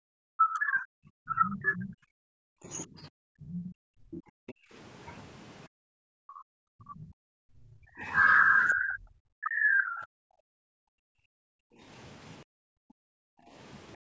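A speech recording in which the main talker's level collapses from 0.00 s to 12.96 s, dropping by as much as roughly 40 dB and losing about four seconds in total. This is speech suppressed in double talk, likely caused by an echo canceller that could not tell the talker from loudspeaker echo and attenuated both. Between 1.50 s and 8.74 s a second voice sits faintly underneath, around 20 dB below the main speech. This is the other side's voice leaking through, likely because far-end playback reached the microphone and was not fully cancelled. From 3.26 s to the end at 14.09 s, the room sound dips or vanishes, by up to about 40 dB and for roughly three seconds altogether. That is background gated by the echo canceller, which clamps the microphone hard while the loudspeaker is active and releases it afterwards. The call microphone processing band-limits the whole clip, with nothing above 8 kHz.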